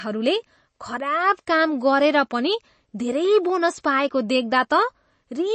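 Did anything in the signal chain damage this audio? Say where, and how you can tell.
Yes: at the codec stage, the speech has no content above 8.3 kHz throughout and a watery, swirly texture, likely MP3 compression at a low bitrate around 32 kbps, cutting treble and toggling weak frequency lines.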